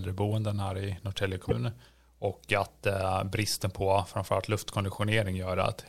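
Speech with one fault: damaged data in a compressed stream at 1.48 to 1.52 s, where corrupted frames make the decoder lose sync, producing a brief glitch.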